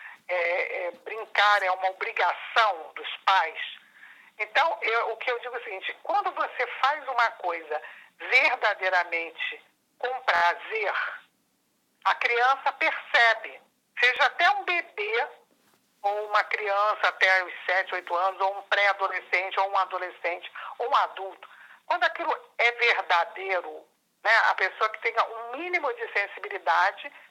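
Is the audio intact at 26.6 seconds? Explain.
Yes, the audio is intact at 26.6 seconds, with no dropout, click, distortion or other fault to be heard there.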